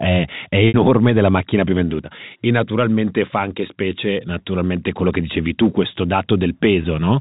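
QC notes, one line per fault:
0.68 to 0.74 s, packet loss with pitch repetition: a brief buzzy hold that fades toward silence before the sound cross-fades back. A 60 ms gap, likely about three lost packets, was bridged by repeating the last pitch period.
6.82 to 6.84 s, packet loss with pitch repetition: a slight buzzy hold. A 20 ms gap, fitting one lost packet, was filled by repeating the last pitch period, audible over the band-limited G.711 telephone coding.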